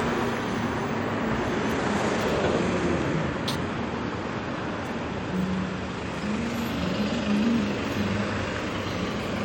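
A recording of everyday sounds, with no technical fault to be heard in it. Nothing in the audio points to a problem in how it was captured or delivered.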